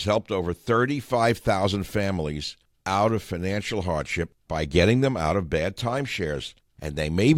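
No technical faults are audible.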